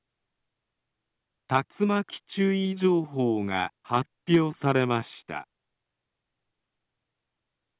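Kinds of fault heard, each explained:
No audible faults detected.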